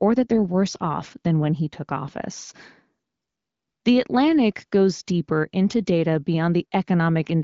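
Nothing stood out on listening to this speech clip, which comes through an AMR wideband (HD Voice) codec path at 15.85 kbit/s with its top end stopping around 7.3 kHz.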